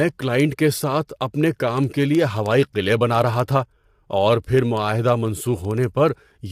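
Throughout the speech, likely low-delay AAC compression at a low bitrate near 32 kbps, with short frames poorly resolving pitch harmonics, leaves the voice plainly rough and grainy.

From 0.15 s to 6.46 s come word clock ticks. An unlocked receiver clock, off by a few hundred parts per million, slips one sample roughly every 70 ms, giving around a hundred sharp, steady ticks.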